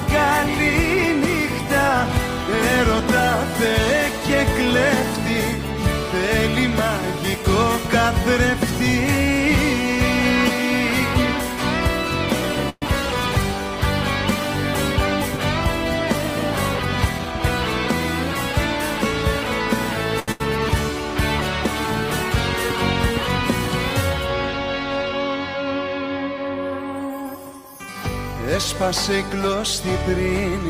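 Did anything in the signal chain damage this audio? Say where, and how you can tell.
Yes. Network stage, call audio freeze at 12.69 to 12.84 s. The sound stretches into a fading buzz or hiss, then 40 ms of silence. Packets were likely delayed; nothing is lost.

Jitter buffer speed-up, 17.07 to 18.76 s. Playback runs at 104% with unchanged pitch. The receiver trimmed about 70 ms of pitch periods to shrink excess delay.

Short stall from a late packet at 20.20 s. The last sound is held 81 ms with a slight buzz or dip. The buffer ran empty, then resumed unchanged.

Burst of packet loss, 20.32 to 20.42 s. A fading held sound bridges 80 ms, then audio jumps ahead. That 80 ms was lost or came too late to play.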